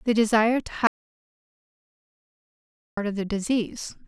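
An audio dropout to silence runs from 0.87 to 2.97 s: the speech cuts off to total silence, no room tone, for 2.1 s, likely from the input being lost.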